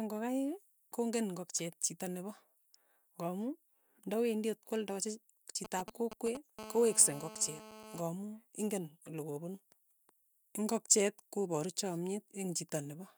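A speech recording carries interference from a nearby 2G phone. Right after "nda wendi at kwaldachi", from 5.65 to 6.37 s, GSM signalling bursts break in. They make a galloping dit-dit-dit of brief buzzes. The phone is exchanging short radio bursts with the network, and the audio circuit rectifies them into sound. Each buzz pulses at 217 Hz. The bursts sit roughly 10 dB below the speech. From 6.59 to 8.01 s a GSM phone buzz follows. It is a hard, raspy tone at 217 Hz, rich in harmonics. It holds steady, as it does when a call is active. The phone transmits in bursts 217 times a second, and the circuitry demodulates the pulses. This buzz lies about 15 dB below the speech and has nothing to do with it.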